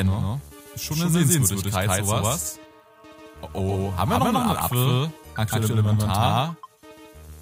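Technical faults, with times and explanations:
Throughout, doubled audio track. Every sound arrives twice, with a second full-band copy trailing the first by about 150 ms. The copy is roughly as loud as the original, so the two compete evenly and the sound feels smeared and stuttery. The late copy carries no decay or room colour, so it reads as a clean repeat rather than an echo. It likely comes from the signal being captured a second time through a slower path.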